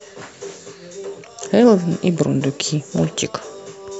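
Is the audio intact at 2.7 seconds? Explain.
Yes, the speech at 2.7 seconds plays through without any audible fault.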